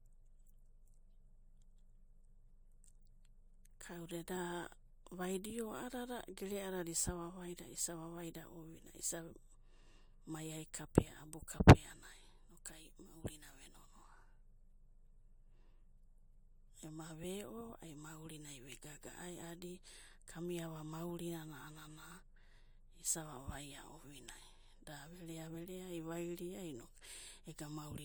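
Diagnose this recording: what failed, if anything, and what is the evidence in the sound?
Nothing in the recording points to a failure at any stage, so there's nothing here to chase down.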